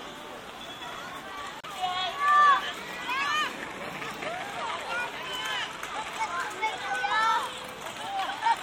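A Bluetooth stall at 1.60 to 1.65 s cuts the sound to 32 ms of silence, likely because interference held back packets until the headphones' buffer ran dry.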